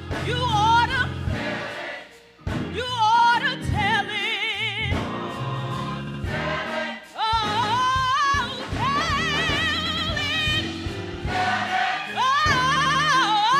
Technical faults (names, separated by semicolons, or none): repeated frames